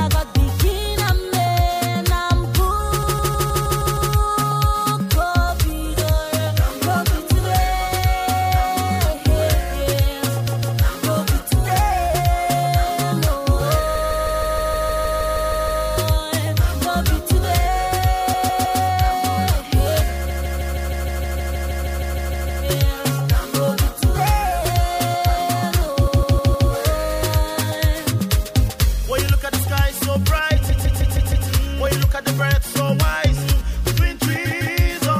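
Repeated frames stutter the audio at 3.02–4.12, 10.47–10.78, 13.94–15.82, 18.33–18.80, 20.29–22.64, 26.06–26.69, 30.68–31.47 and 34.45–34.76 s. A 156.7 ms block, consistent with six compressed frames, was sent again two to fifteen times, lengthening the audio.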